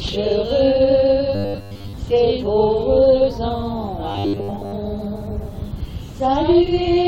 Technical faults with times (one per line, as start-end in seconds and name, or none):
1.35-1.94 robotic sound from repeated short buffers
4.11-4.73 robotic sound from repeated short buffers